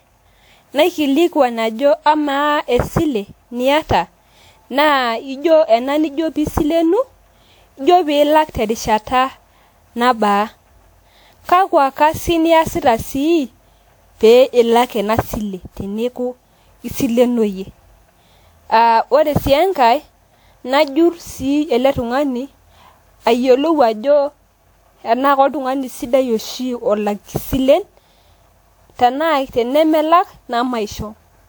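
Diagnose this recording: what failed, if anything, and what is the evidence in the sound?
The failure sits at the codec stage: the speech has likely been decoded and re-encoded around ten times through a lossy codec, with the character pointing to WMA 1 at 128 kbit/s. Each pass requantised the signal on a shifted frame grid, so noise stacked up. Throughout the clip this generation loss makes the speech swirly, smeared and hollow, with blurred consonant attacks, all well beyond what that bitrate would produce in one pass. The content still reaches about 20.1 kHz.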